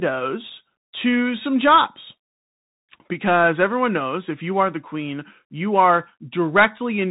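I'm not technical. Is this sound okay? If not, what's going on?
No. The speech has gone through a Bluetooth CVSD headset codec, the basic link many wireless headsets use for calls. It affects the whole clip. Nothing above about 3.8 kHz gets through, so the voice sounds thin and muffled, like a phone call. The codec tracks the sound in tiny up-and-down steps. It can't keep pace with sharp sounds, so s sounds turn scratchy. A grainy hiss sits underneath throughout, and the damage is plainly audible.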